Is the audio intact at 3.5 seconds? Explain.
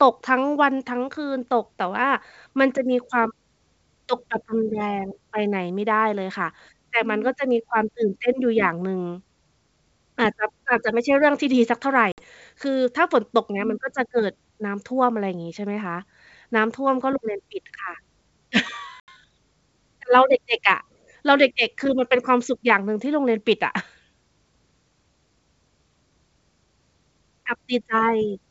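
Yes, at 3.5 seconds the speech is intact, carried through G.722 wideband telephone coding at 64 kbit/s with no fault at that moment.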